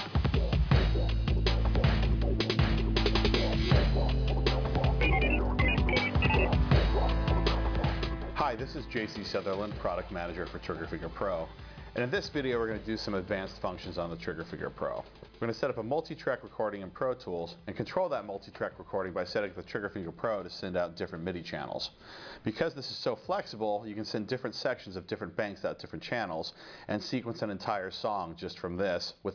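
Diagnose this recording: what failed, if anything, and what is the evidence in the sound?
Nothing failed; no fault can be heard anywhere.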